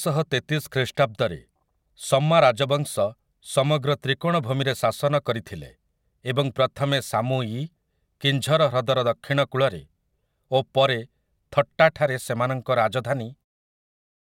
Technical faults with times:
none

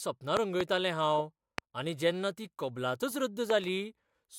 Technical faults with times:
0.37-0.63 loud pop
1.58-1.60 loud pop
3.50-3.66 loud pop

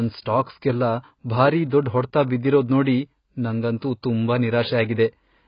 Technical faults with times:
0.00-5.48 AAC compression

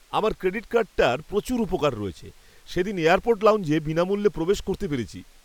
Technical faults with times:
none

